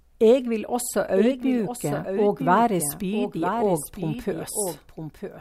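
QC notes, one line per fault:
Throughout: doubled audio track. A dry, full-band copy of the speech trails by about one second, roughly 5 dB down, likely from a second, slower capture path.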